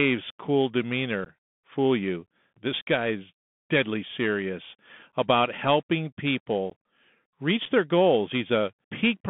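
The speech runs through a Bluetooth CVSD headset codec throughout. The band sits between about 150 Hz and 3.5 kHz, so it sounds thin and boxed. The adaptive one-bit coding, consistent with a 64 kbps link, leaves plainly audible granular hiss, scratchy s sounds and distortion on loud passages.

Unconcealed Bluetooth headset packet loss follows. At 1.25 s, 6.70 s and 7.65 s the sound drops out abruptly. The first two gaps last about 15 ms, which fits roughly two lost packets. The third lasts 7.5 ms, about one packet. Nothing fills the holes, so each cuts in sharply.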